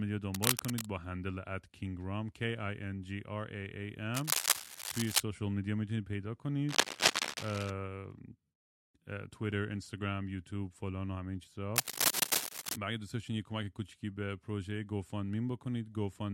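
Speech, interrupted by cable scratch noise at 0.34–0.86 s, 4.14–5.20 s, 6.69–7.71 s and 11.76–12.76 s: dense, uneven crackling bursts, roughly level with the speech at first and then louder than it, likely from a worn cable or connector being moved.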